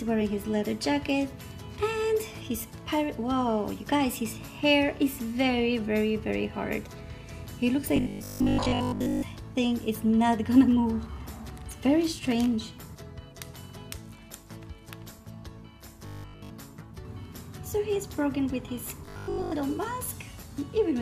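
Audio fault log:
7.96–9.24 s, 16.06–16.50 s, 19.06–19.52 s: robotic sound from repeated short buffers. A rigid metallic 50 Hz buzz is heard. Likely cause: a 20 ms slice looping while most real audio, and all of it at 16.1 s, is skipped.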